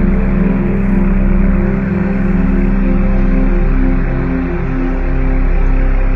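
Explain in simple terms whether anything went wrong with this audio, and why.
Adaptive stream at a lower bitrate, from 2.70 s to the end: the stream quietly switched to a lower-quality version, likely because the connection slowed. The sound turns dull and smeared at once, with nothing above about 6.9 kHz, but it never stops.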